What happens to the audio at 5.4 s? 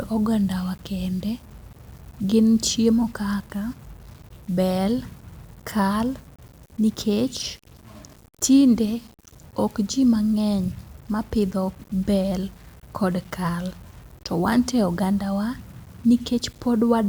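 At 5.4 s the speech is grainy, as it is throughout the clip, likely from low bit depth without dither, which fits rounding to 7 bits. The error sits about 30 dB below the signal, so the waveform looks stair-stepped and the spectrogram shows hash that tracks the speech.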